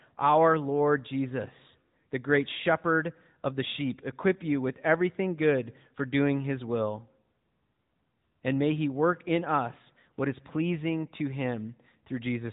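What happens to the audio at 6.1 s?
At 6.1 s, like the whole clip, the speech is running through an AMR narrowband mobile codec, which fits a mid bitrate near 10 kbps: nothing above 3.8 kHz, with an audibly buzzy, synthetic edge.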